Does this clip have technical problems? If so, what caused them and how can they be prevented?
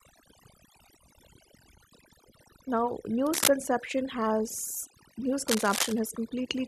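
Yes. Overdone noise removal runs throughout: bands near the noise estimate were pushed far down, so pauses sit near silence with twinkling specks. A spectrogram shows isolated dots and torn holes between harmonics. Use milder reduction settings.

Cable scratch noise rustles from 3.26 to 3.48 s, about 5 dB above the speech, and from 5.48 to 5.99 s, about 5 dB below it. It is likely a worn connector whose contact resistance jumped as it moved. The waveform shows dense jagged spikes, and the spectrogram shows broadband smears. Replace and secure worn cables.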